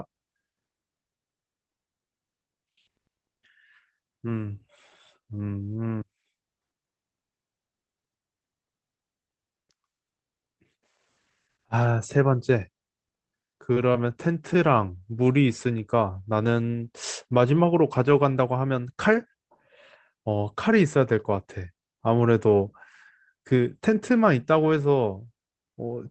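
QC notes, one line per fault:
13.74–13.77 s, 13.92–13.96 s and 14.54 s: short concealed packet loss. Each gap, about 20 ms in the first two and about 10 ms in the last, never reached the decoder in time, so the receiver extended the preceding sound from its pitch or as shaped noise, then blended back into the real audio. That patching comes through as a brief smear or wobble in the band-limited call-codec speech.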